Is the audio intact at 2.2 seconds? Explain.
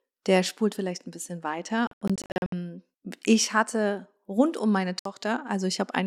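No. Around 2.2 seconds the audio sits inside a Bluetooth dropout running from 1.87 to 2.53 s. Over those 650 ms the speech cuts out repeatedly in short gaps that add up to about 366 ms of silence, the longest lasting 81 ms. After each gap the speech resumes further along, as though it had kept playing. The likely cause is audio packets reaching the headphones too late and being discarded, leaving the output silent until the next good packet arrived.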